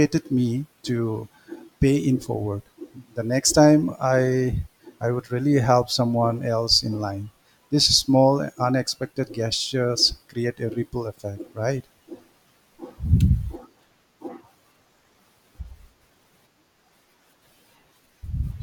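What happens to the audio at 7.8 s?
Nothing goes wrong at 7.8 s; the speech runs through that moment intact, with no dropout, click, glitch or other fault.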